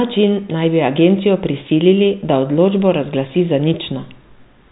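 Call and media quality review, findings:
Telephone-band speech over G.711 coding, consistent with a 64 kbps A-law path, with nothing above about 3.8 kHz and only the faint level-following quantisation noise expected of that format.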